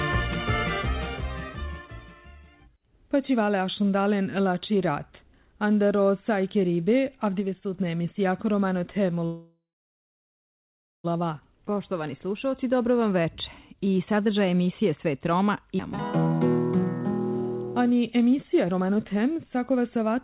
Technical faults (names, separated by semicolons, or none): call audio freeze; jitter buffer speed-up; skip ahead